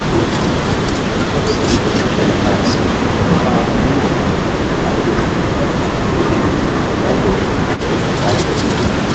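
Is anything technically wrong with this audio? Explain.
Yes, two kinds of fault are audible.

Echo leak, at 1.87–2.05 s, 2.21–4.30 s and 7.76–7.81 s: a delayed copy of the speech trails the original, 227 ms late in the first two stretches and 182 ms late in the last. It is likely caused by a far-end echo canceller letting loudspeaker pickup through. The copy sits about 5 dB below the speech, then about 10 dB below at 7.76 s.

Speech suppressed in double talk, at 4.83–5.60 s and 5.84–6.11 s: the speech dips by roughly 15 dB, then roughly 10 dB, over about half a second and a third of a second. The likely cause is an echo canceller that mistook overlapping talk for echo and turned it down.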